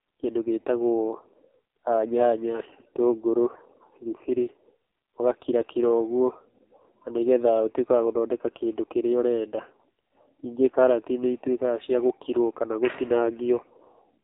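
Speech run through the AMR narrowband mobile codec for the whole clip, and it's pretty rough. Everything above 3.8 kHz is gone, so the sound is boxed into that thin phone-call band with no air or sibilant sparkle. The codec rebuilds the voice from a vocal-tract model fed by a handful of pulses per short subframe, and the heavy buzzy, synthetic quality fits one of AMR-NB's lower modes, around 5.9 kbps, where there just aren't enough bits to carry the detail.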